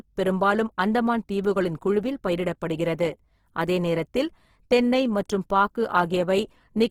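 From start to finish the speech has a rough, grainy texture, with a noisy fizz where the voice's harmonics should sound clean, and the damage is plainly audible. The top end stays open up to about 20.3 kHz, so the sound is not muffled. This is likely Opus compression in its music-oriented mode at a very low rate, which fits roughly 16 kbps, where bands starved of bits get filled with folded or noise-like content instead of detail.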